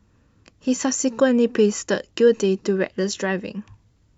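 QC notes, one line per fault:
No technical faults are present in the speech signal.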